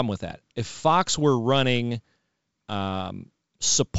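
Nothing's technically wrong with this speech recording; it's simply G.722 wideband telephone coding at 64 kbit/s, which is why the top end stops at around 7.7 kHz.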